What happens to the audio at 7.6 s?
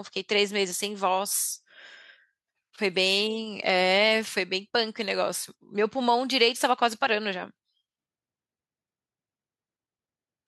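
Nothing goes wrong at 7.6 s; the speech there plays through cleanly, with no dropout, click or other fault.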